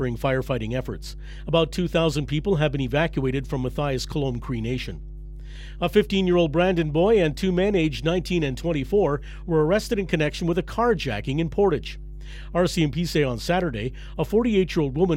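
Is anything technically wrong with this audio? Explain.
Yes: mains hum runs through the whole speech clip, a steady 50 Hz tone about 15 dB below the voice, picked up from the power line. Unlike broadband rumble, it holds one fixed pitch.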